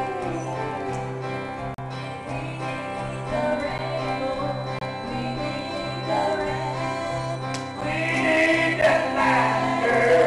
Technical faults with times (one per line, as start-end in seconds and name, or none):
1.74-1.78 gap between stream segments
3.78 gap between stream segments
4.79-4.81 gap between stream segments
7.81 gap between stream segments
8.81 gap between stream segments